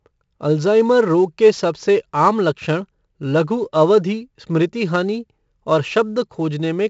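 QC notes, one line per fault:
throughout, 4-bit ADPCM compression: gritty hiss riding on louder speech, roughed-up attacks, and nothing above 7.7 kHz. The 64 kbps stream fits a 16 kHz sample rate.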